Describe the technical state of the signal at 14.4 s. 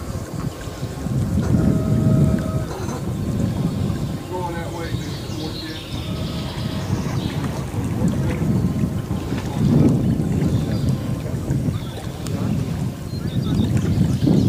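At 14.4 s the signal is intact, with no audible fault at that moment.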